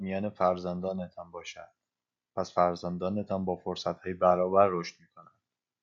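No technical faults can be heard anywhere in the recording.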